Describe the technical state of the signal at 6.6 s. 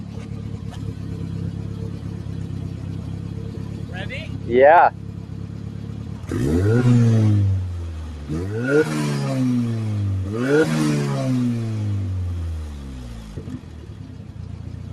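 At 6.6 s you're hearing the noise suppressor applied to music or sounds, which runs the whole clip: it mistakes sustained parts for noise, so held sound and tails dip by around 10 dB and pump.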